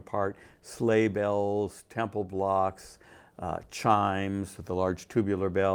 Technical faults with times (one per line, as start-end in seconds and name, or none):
none